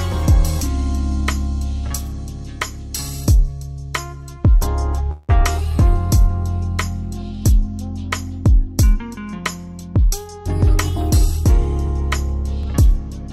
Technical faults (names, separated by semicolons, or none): call audio freeze; dropped buffer (overrun)